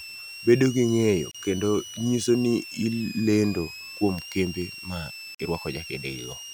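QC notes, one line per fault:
Throughout: switching supply whistle. A high whistle sits under the speech, wandering between about 2.4 and 3 kHz, at about 15 dB below the speech. A switching power supply running in an audible burst mode, or beating with another one, produces this. Its pitch shifts as the load changes.
1.31–1.35 s and 5.35–5.40 s: gap at a join of encoded pieces. Silences of 33 ms and 49 ms cut into continuous speech, 4 s apart. Their edges are smeared by the codec. Separately encoded pieces were joined untrimmed, leaving encoder delay and final-frame padding. The speech then resumes where it stopped.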